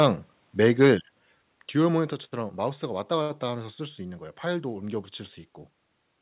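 Microphone overload in this speech clip, from 0.00 to 0.07 s and again from 0.64 to 0.91 s, gives the loudest syllables a harsh, crackly edge. The peaks run about 4 dB and about 3 dB past the converter's limit, flattening a few percent of samples, likely from an input volume set too high. A microphone volume stepped down follows at 1.02 s and again at 2.13 s: the voice and the background both fall abruptly, by about 5 dB and then about 3 dB, likely the pattern of call software cutting the device's input gain after detecting clipping. Everything passes through a narrowband call path with nothing above 4 kHz, which fits G.711.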